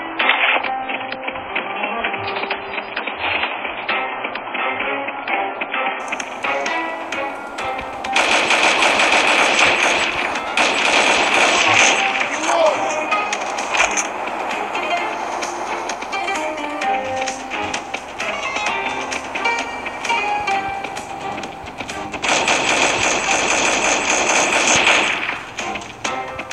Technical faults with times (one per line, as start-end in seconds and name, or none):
0.00-6.00 adaptive stream starting at a low bitrate